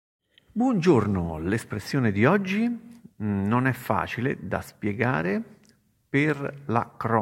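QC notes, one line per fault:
No audible faults found in this speech clip.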